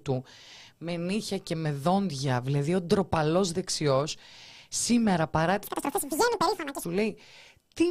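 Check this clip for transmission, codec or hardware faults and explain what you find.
One fault is present: between 5.64 and 6.85 s the speech is affected by audio being read two samples at a time, giving double speed. The reader took each pair of samples as a single frame, as if the stream were stereo or used samples twice as wide, so it consumed the data twice as fast as intended. The speech plays at 2x speed and a full octave higher.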